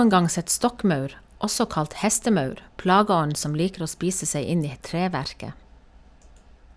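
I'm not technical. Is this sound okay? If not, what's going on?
Yes, no technical faults are audible in this speech recording.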